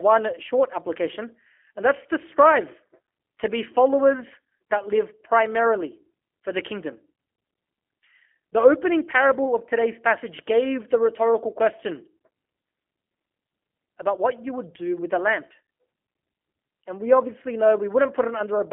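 Throughout, the speech runs through G.729 coding, which fits an 8 kbit/s link: a model-based rebuild that leaves plainly audible synthetic roughness and nothing above 3.5 kHz.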